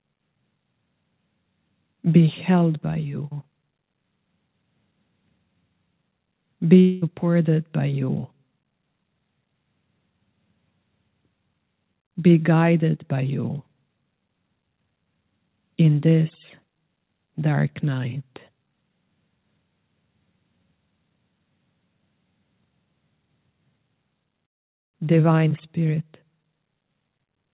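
From 6.8 to 7.04 s the sound turns into a buzzy, fading continuation of itself, likely a long network dropout: about 220 ms never arrived and was filled with decaying repeats rather than silence. A waveform shows shrinking, regular repetition with no gap. A spectrogram shows smeared, flat bands below the call path's 4 kHz ceiling.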